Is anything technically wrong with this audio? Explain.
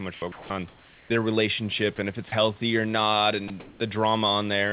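Yes. The sender's voice detector likely misjudged parts of the speech as background and stopped sending, so the receiver filled those moments with comfort noise. This happened at 0.14–0.22 s, 0.32–0.50 s, 1.96–1.98 s just before "and if it's healthy", 2.28–2.32 s between "relationship and if it's" and "healthy or not", and 3.48–3.50 s. In each case the speech briefly gives way to a flat hiss and then resumes, which clips syllables.

Comfort noise in place of the background appears at 0.68–1.10 s and 3.6–3.8 s, the second just after "it's healthy or not". In those pauses, transmission likely halted and synthetic noise stood in for the real room sound. The background turns smooth and featureless, about 2 dB quieter in the first stretch and about 2 dB louder in the second.

Across the whole clip, nothing is heard above 4 kHz, which points to a narrowband call codec such as G.711.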